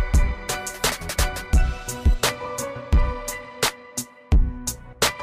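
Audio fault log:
2.98 s to 5.23 s, periodic clock jitter: the converter's sample clock is being shaken at a steady rate of around 700 Hz, placing sidebands that far above and below each component. Higher-frequency content takes the strongest sidebands, giving the sound a rough, metallic edge.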